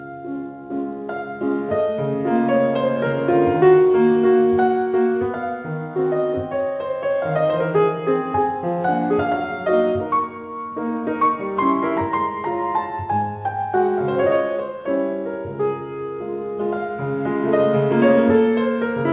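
No technical faults are audible.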